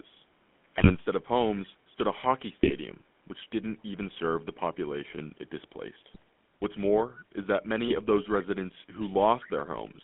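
The GSM full-rate codec colours the whole clip. The band runs from about 150 Hz to 3.5 kHz, and nothing above that survives. The damage is plainly audible as a buzzy, gravelly roughness, which fits the 13 kbps full-rate coder. That coder models the vocal tract as a filter. It excites it with regularly spaced pulses and keeps only every third excitation sample. The texture is therefore coarse.

GSM bit errors first strike from 0.78 to 0.95 s. Corrupted bits reached the decoder. Wrong filter, pitch or gain values then bent the spectrum or threw the level off, frame after frame. The sound breaks up into squawks, pops and gargling. Further bursts follow from 2.62 to 2.75 s and from 6.14 to 6.22 s.

From 7.14 to 7.19 s a brief, quiet copy of the sound returns. It is delayed by about 241 ms and sits about 20 dB below the speech. This is likely an echo leak. One side would be playing the call on a loudspeaker, and its echo canceller let some of that pickup through. 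The copy is a short scrap, not a sustained echo.

A last burst of GSM bit errors hits from 7.88 to 7.99 s with the same gargled breakup.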